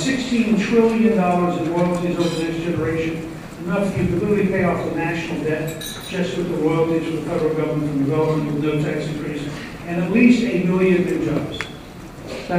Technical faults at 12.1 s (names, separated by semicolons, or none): none